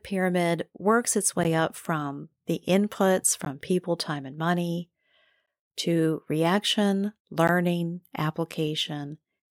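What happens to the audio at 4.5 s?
Nothing goes wrong at 4.5 s; the speech carries straight through that point with no dropout, click, distortion or other technical fault.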